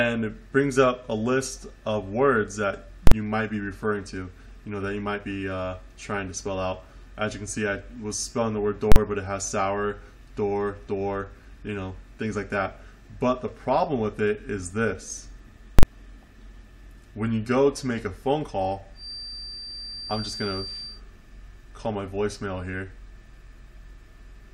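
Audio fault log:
3.07 s, 8.92 s and 15.79 s, invalid numbers at full scale: each is a single harsh bang about 43 ms long. A calculation produced infinite or invalid values that were forced to the maximum level for a whole block, which fits a 2048-sample block.
18.93 to 21.03 s, feedback whistle: a thin, steady 4.7 kHz tone sits well below the main sound and swells and fades slowly in level. Its likely cause is a loudspeaker-to-microphone loop held just at the edge of feedback, sustaining one frequency without running away.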